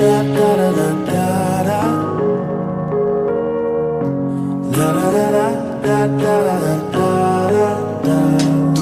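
No technical fault can be heard anywhere in the audio. There is nothing in it to place on a timeline.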